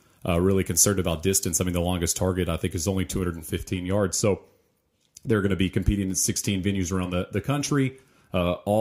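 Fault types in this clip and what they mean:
Pre-emphasis left on: a treble boost following the CD 50/15 µs curve was never reversed, so from 0 to 3.58 s the speech sounds thin, bright and sibilant, about 8 dB hot at 10 kHz. A spectrogram shows brightened upper bands that dim after 3.58 s.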